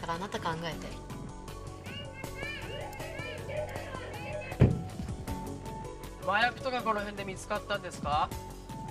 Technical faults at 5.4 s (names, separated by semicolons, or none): none